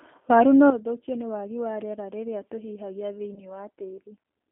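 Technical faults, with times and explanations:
Throughout: G.729 codec. The speech is carried at 8 kbit/s through a telephone band of roughly 250 Hz to 3.4 kHz, so nothing bright survives above that. Each 10 ms frame is rebuilt from a vocal tract filter, a pitch predictor and a few pulses. The result is plainly audible: a rough, slightly synthetic texture, with background sound warbling instead of staying steady.
0.70 s to the end: sudden gain jump. At 0.70 s the level drops by about 11 dB in a single step and stays there until the clip ends. Speech and background noise fall together, which points to a change in digital gain rather than anything in the room. There is no fade, so the step is abrupt. The likely cause is a gain setting or bit shift applied without a ramp.
3.34 s to 3.45 s: VoIP packet loss concealed by the speech codec. About 20 ms of audio went missing, which fits one lost packet. 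The decoder filled the gap by extending its last pitch and filter, stretching the speech into a sound that fades. Because each frame builds on the one before, the distortion lingers after real data returns, so the damage spans about 0.11 s.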